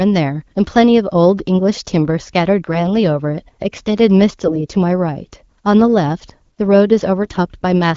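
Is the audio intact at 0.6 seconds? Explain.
No. AMR bit errors hit just before, from 0.52 to 0.58 s, which fits about three 20 ms frames. A few percent of the weakly protected bits in the AMR-WB stream arrived flipped, misplacing excitation pulses and skewing gain and spectral values. Pitch and level hold, but the audio turns hoarse and gargly.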